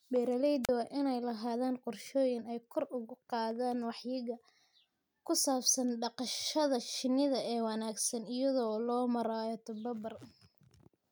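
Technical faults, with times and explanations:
0.63–0.69 s, wireless microphone squelch dropout: the radio link from an analogue FM microphone weakens, hiss surges briefly, and the receiver's squelch shuts the output for about 39 ms before the speech resumes with "waa in ay lahaadaan". On a spectrogram this shows as a thin wash of broadband noise followed by a blank vertical gap. On the waveform the amplitude collapses to a flat line, then the speech envelope returns.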